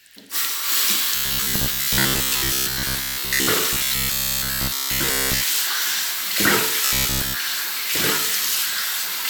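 New audio was likely arriving too seldom, so the playback path kept filling the gaps by looping its last fragment of roughly 15 ms while most of the real sound was skipped. The result is robotic sound from repeated short buffers, from 1.15 to 3.47 s, 3.73 to 5.44 s, and 6.86 to 7.36 s. Each stretch carries a rigid, metallic buzz at 66.8 Hz over the sounds, whose shape still comes through only roughly.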